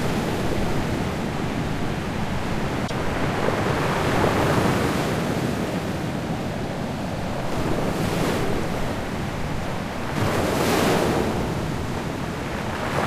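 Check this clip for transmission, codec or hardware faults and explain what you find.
One fault is audible: a corrupt frame decoded, at 2.87 to 2.91 s. For about 36 ms, a single compressed frame with damaged bits was decoded anyway rather than concealed. The misread gains and codes put energy at frequencies the sound never had, giving a short chirp-like burst that peaks around -15 dBFS. On a spectrogram it appears as a thin vertical smear of unrelated frequencies confined to that one frame. The waveform shows a brief, abrupt disturbance.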